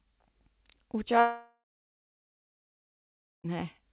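A speech clip sent over a call path whose sound stops at 4 kHz, which fits G.711 mu-law at 64 kbps. At 1.2 s the speech breaks off in a long network dropout. The last sound carries on briefly as a fading buzz. Then about 1.8 s of silence follows. Speech returns at 3.46 s, with roughly 2.2 s simply gone. The likely cause is a run of lost packets that the receiver could only conceal, not recover.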